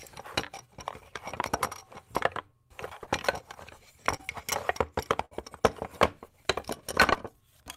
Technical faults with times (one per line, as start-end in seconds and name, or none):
3.03-3.09 short concealed packet loss
4.17-4.21 short concealed packet loss
5.25-5.33 burst of packet loss
7.13-7.17 short concealed packet loss